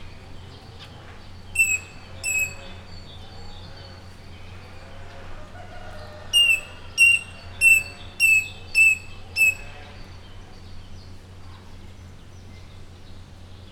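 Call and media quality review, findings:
No audible faults found in the clip. Nothing to escalate on the media path for this sample.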